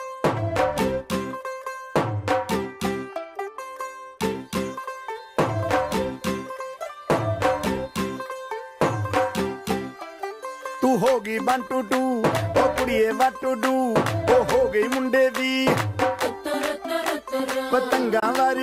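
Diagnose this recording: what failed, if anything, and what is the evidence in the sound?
A silent gap from 18.20 to 18.23 s, with the sound resuming as if it had played on, points to a likely Bluetooth dropout at playback, consistent with one lost packet, not an edit.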